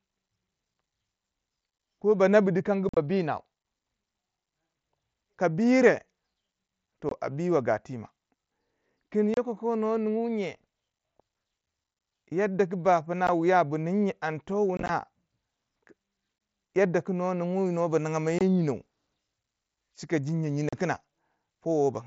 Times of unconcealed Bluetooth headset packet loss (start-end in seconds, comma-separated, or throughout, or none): 2.89-2.97, 7.09-7.12, 9.34-9.37, 13.27, 14.77-14.89, 16.38-16.41, 18.39-18.41, 20.69-20.73